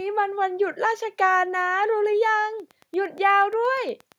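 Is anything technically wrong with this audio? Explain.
Yes, a train of clicks runs from 2.60 s to 4.13 s, about fifteen evenly spaced pulses at roughly 8.6 per second, each peaking about as loud as the speech itself. The likely cause is a repeating electrical disturbance, such as interference from nearby equipment or a faulty connection or power supply. It is heard as a regular ticking laid over the speech. A waveform shows similar sharp spikes at fixed intervals, and a spectrogram shows thin vertical broadband lines evenly spaced across that stretch.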